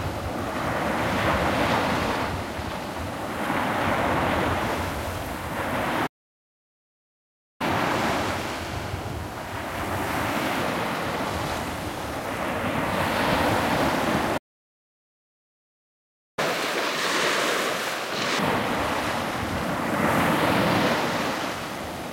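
An everyday sound recording with two playback stalls and two stretches of catch-up at higher speed. The audio cuts to silence from 6.06 to 7.61 s and again from 14.37 to 16.39 s. The player likely ran short of data. After each gap it plays its backlog faster to regain lost time. From 7.61 to 10.61 s it runs 1.1 times fast, about one and a half semitones sharp. From 16.39 to 18.39 s it runs at double speed, about ten semitones high.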